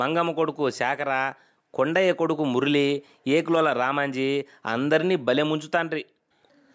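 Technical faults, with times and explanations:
Nothing to flag here: the speech has simply been through a call's microphone processing, which trims the lowest bass and leaves nothing above 8 kHz, and that's just how such a path normally sounds.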